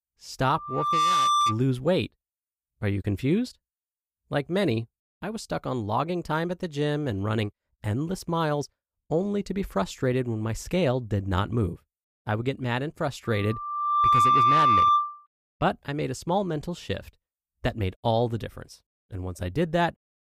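A microphone picks up the loudspeaker it feeds, and at 1.2 kHz the loop gain tops one, so that frequency keeps reinforcing itself: loudspeaker feedback squeal. From 0.48 to 1.60 s a single 1.2 kHz tone swells over about half a second to around 5 dB above the speech. It returns from 13.24 to 15.27 s, building more slowly, over roughly a second, and peaking louder, about 10 dB over the speech.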